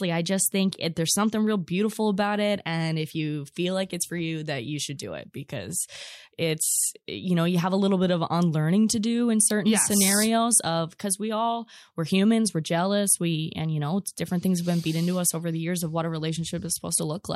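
A speech recording with no technical faults to report. Nothing in the signal chain calls for comment at any point.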